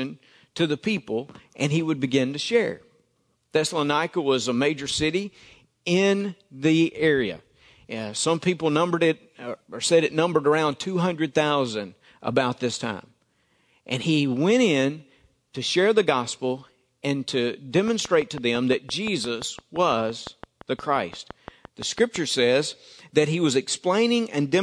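Something, likely interference from nearby equipment or a faulty connection, starts injecting a pulse into the signal at 17.88 s, just after "the gospel and to", and keeps it up until 22.17 s, before "says that he was". This train of clicks runs at a steady 5.8 per second, around thirty near-identical pops in all, peaking about 5 dB above the speech. It's heard as an even ticking laid over the voice and through the pauses.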